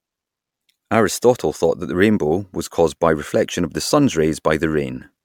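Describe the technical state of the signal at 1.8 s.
At 1.8 s the speech carries generation loss, present throughout the clip: it was likely decoded and re-encoded as MP3 around five times, each pass re-quantising on a shifted frame grid. Accumulated noise and spectral holes sound swirly and hollow, with blurred attacks, beyond what the 128 kbit/s rate alone would explain.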